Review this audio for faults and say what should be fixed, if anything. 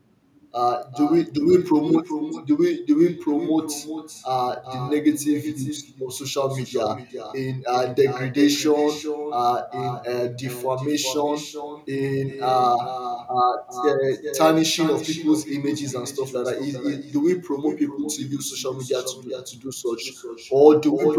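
Echo with no canceller runs through the whole clip: every phrase is followed, about 0.4 s later, by a second copy about 10 dB quieter and thinner than the original. The far end is playing the call through a loudspeaker, its microphone picks that playback up, and nothing subtracts it, so the talker's own speech returns after the network round trip. Enabling acoustic echo cancellation on the far-end device, or having that participant use a headset, would prevent it.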